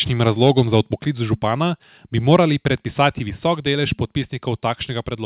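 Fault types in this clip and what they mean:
Microphone volume stepped down: speech level drops abruptly by about 3 dB at 1.02 s and again at 3.3 s, likely from automatic input-gain reduction.
Microphone overload: from 2.33 to 2.36 s, after "župana bi", peaks run about 2 dB past the converter's limit and are flattened, likely from excessive input gain.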